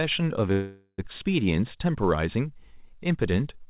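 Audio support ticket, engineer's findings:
Call audio freeze, 0.52 to 1.00 s: last sound stretched into a fading buzz, about 30 ms near-silence, then resumes where it left off. Likely jitter buffer underrun, packets held up. Nothing lost, just delayed.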